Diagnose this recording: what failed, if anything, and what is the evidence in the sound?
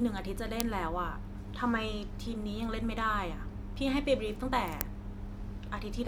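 The failure is in the driver or buffer stage: an uninitialised buffer was played twice, at 0.60 s and again at 4.81 s. Each event is a very short, loud crack cutting into the speech, lasting about 0.73 ms, which fits a 32-sample block. The output side consumed a block before any audio had been written into it, so whatever stale data sat in that memory was sent out as samples.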